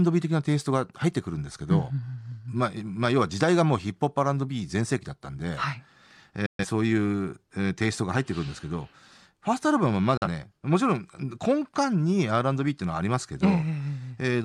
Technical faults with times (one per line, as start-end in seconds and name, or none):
6.46-6.65 digital broadcast dropout
10.17-10.27 digital broadcast dropout